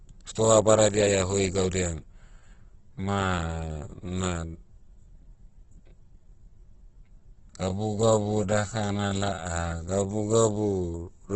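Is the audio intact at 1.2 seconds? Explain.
No, heavy Opus compression runs throughout, likely around 12 kbps: bit-starved bands get noise-filled, leaving the speech grainy and rough, with nothing above 8.3 kHz.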